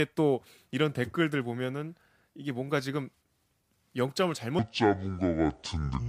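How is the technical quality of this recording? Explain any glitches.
One glitch affects the end of the recording. From 4.59 s to the end, speech turns deep and sluggish, about ten semitones low: a section at the wrong speed, likely played at 0.6 times.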